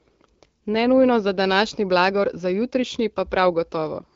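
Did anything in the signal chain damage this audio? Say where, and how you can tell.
No, nothing in the chain damaged this speech; the band stops at about 7.4 kHz, which fits an AMR wideband (HD Voice) link running at 12.65 kbit/s as designed.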